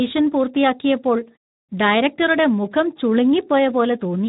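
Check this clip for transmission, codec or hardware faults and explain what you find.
There is one codec fault, present for the whole clip. Speex codec: starved CELP excitation, fitting an 11 kbps setting, makes speech hoarse and grainy and empty above 3.8 kHz, rougher than plain low-pass filtering.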